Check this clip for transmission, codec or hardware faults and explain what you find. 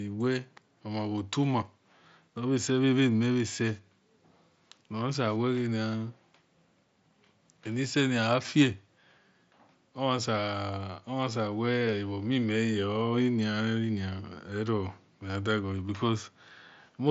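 One transmission fault is audible in this speech clip, a short dropout on the Bluetooth headset link.

Concealed Bluetooth headset packet loss, 11.79 to 11.81 s: about 22.5 ms of audio failed to arrive from the headset, which fits roughly three lost frames. The phone filled the gap by repeating the closest-matching piece of the waveform it had just received. Because it is a run of lost frames, it comes through as a brief buzzy, held tone with a slight warble as the real signal resumes, all within the light band limit of the mSBC headset codec.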